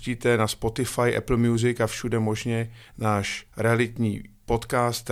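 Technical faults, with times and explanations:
No technical faults are audible in this speech recording.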